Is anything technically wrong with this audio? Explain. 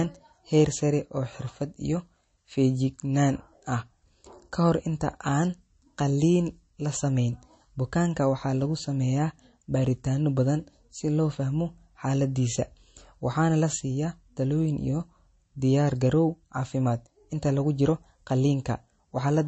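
Yes. The speech carries plainly audible compression damage from start to finish, likely from MP3 encoding. Nothing is present above 8.3 kHz, so the treble is cut flat. Starved of bits, the encoder drops that top band and zeroes weaker frequency lines. Those lines switch on and off between frames. The result sounds watery and swirly, with metallic chirps on s sounds and smeared attacks. The damage fits a very low bitrate, around 34 kbps.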